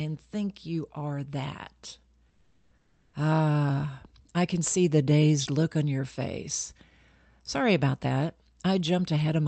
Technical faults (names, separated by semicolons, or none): comfort noise in place of the background